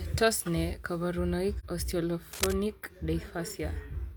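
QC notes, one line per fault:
1.59–1.65 s, AAC frame loss with muting: there's a short soft-edged gap in the speech, about 43 ms long, which fits a single frame going missing. The decoder zeroed that frame's spectrum instead of guessing at it, and because AAC frames overlap, the neighbouring windows taper the sound down and back up around the hole. That's why it comes across as a quick dropout with rounded edges rather than a click.
2.32–2.53 s, cable scratch noise: a burst of dense, irregular scratchy rustling sits over the speech for roughly a fifth of a second, about as loud as the speech itself. It's likely a worn cable or connector being moved, with the contact resistance jumping around rapidly. Each jump injects a spiky little noise burst, and packed together they give that gritty scraping texture instead of a steady hiss.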